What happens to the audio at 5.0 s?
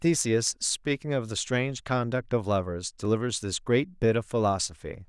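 Nothing goes wrong at 5.0 s; the speech runs on intact there, with no dropout, click or distortion at that moment.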